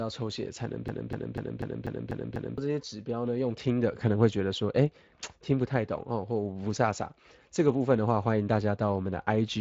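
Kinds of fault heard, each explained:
Speex codec, throughout: a CELP speech coder spends too few bits on the excitation signal, so the speech carries plainly audible coding damage, a noisy, hoarse texture across the whole clip, which fits a Speex stream at roughly 20 kbps.
Broken-record loop, 0.88 to 2.58 s: a fragment of about 0.25 s repeats exactly, back to back, seven times, and the audio due in that span never plays. The likely cause is a stalled player, encoder or stream resending the last fragment it held.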